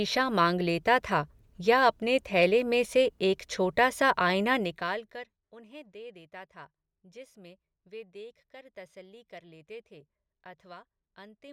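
Listening to this speech recording, nothing technical stood out.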